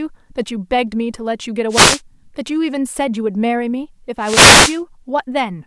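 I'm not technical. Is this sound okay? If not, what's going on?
No. There are two wireless microphone noise hits, at 1.69 to 2.01 s and 4.20 to 4.80 s. The radio signal briefly faded, so static swished over the speech.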